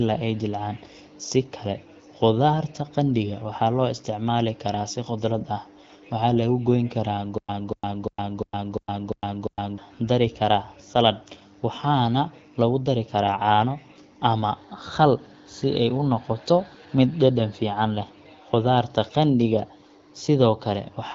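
From 7.38 to 9.78 s, just before "dari karaa saladh", a stutter with silent gaps repeats a 0.24 s burst seven times, each followed by 0.11 s of dead silence, likely a stalled stream.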